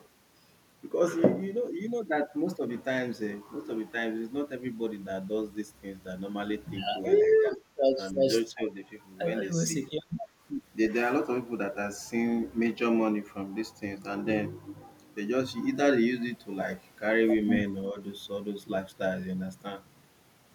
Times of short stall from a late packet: none

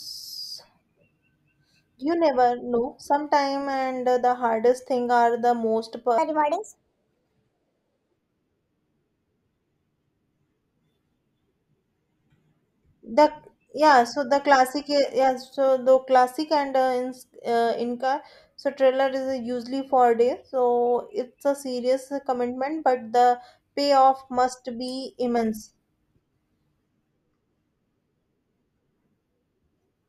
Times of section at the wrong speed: 6.18-8.17

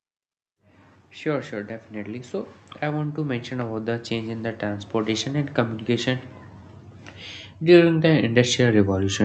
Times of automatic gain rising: 1.22-6.35, 7.59-9.25

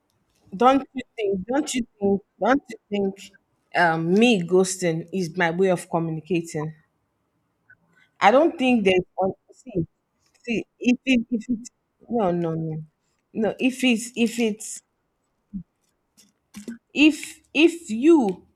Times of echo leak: none

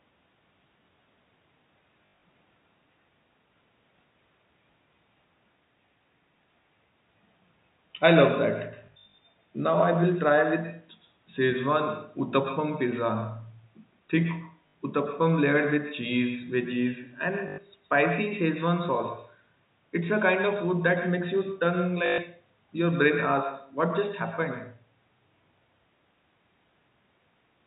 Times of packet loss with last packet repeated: 2.06-2.22, 8.86-9.18, 14.68-14.74, 17.48-17.58, 22.06-22.18

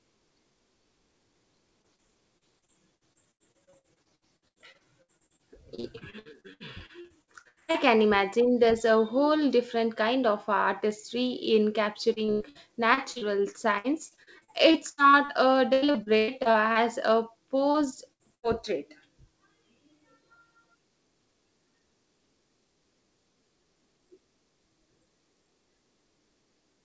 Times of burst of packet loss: 18.13-18.46

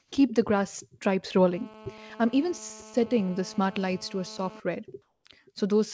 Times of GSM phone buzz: 1.54-4.60

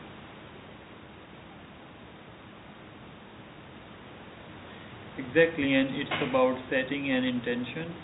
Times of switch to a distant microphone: none

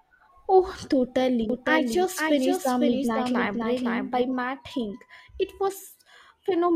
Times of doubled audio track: 1.50-4.22

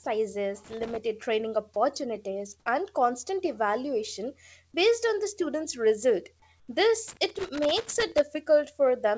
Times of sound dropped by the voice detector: 0.04

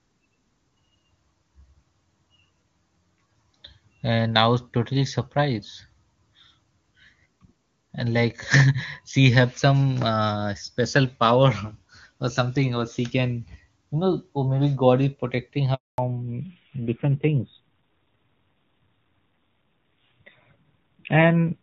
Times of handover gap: 15.74-15.98

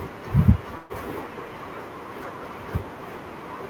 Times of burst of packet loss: 0.77-0.92

